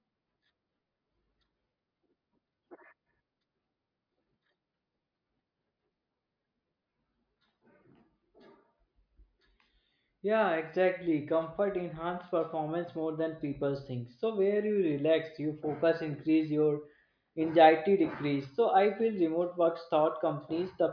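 No technical faults can be heard anywhere in the speech recording. At no moment does the signal do anything that calls for comment.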